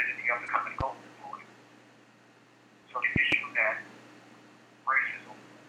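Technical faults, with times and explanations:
0.45–0.48 s, 2.80–2.84 s and 5.10–5.14 s: damaged data in a compressed stream. Each of these 38 ms bursts is a short glitch. Corrupted bytes make the decoder misread those frames, lose sync and jump to the next valid frame header.
0.81–0.83 s and 3.16–3.35 s: loud pop. The first is a single sharp pop about 15 dB above the sound, and the second is a quick pair about 20 dB above it. The sound continues underneath. These are likely voltage transients from a plug, switch, static or driver glitch.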